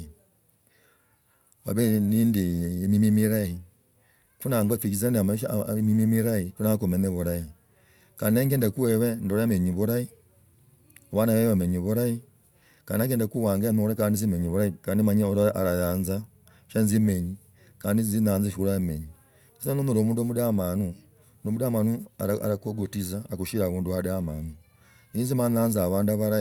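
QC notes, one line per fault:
Level, continuity and tonal balance stay steady across the whole speech recording, with nothing in the signal chain audibly departing from normal operation.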